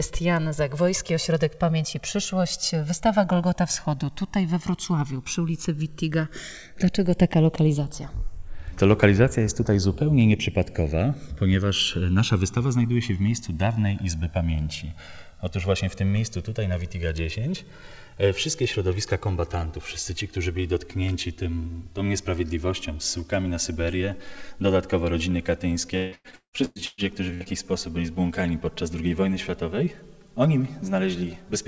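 The two channels were captured on devices running from separate clocks, with a mismatch of around 200 parts per million, so the delay between them creeps steadily and reaches around 5 ms by the end. This is channels drifting apart. When the pair is summed to mono, the comb-filter notches from that shifting offset sweep gradually through the spectrum, heard throughout as a slow flanging swirl.

From 25.97 to 27.49 s there is repeated packet loss, with eight gaps in quick succession, the longest 170 ms. Each hole is covered by extending the preceding sound, and about half of the span ends up concealed. The result is choppy, robotic-sounding audio with pieces dropping out. All of it sits within a band topped at 8 kHz, which fits a G.722 call codec at 64 kbps.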